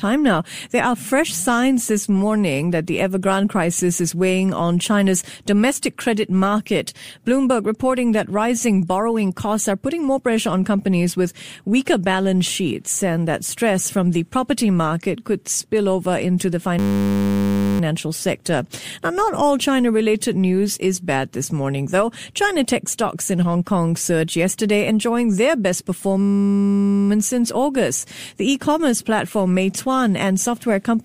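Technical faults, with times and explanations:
16.79–17.80 s, after "spill over into the": system hang loop. A 10 ms slice repeats about 100 times, giving a steady 100 Hz buzz while playback stalls.
26.22–27.09 s, after "yesterday enjoying their best": system hang loop. The same 10 ms cycling recurs, 87 repeats, heard as a 100 Hz buzz.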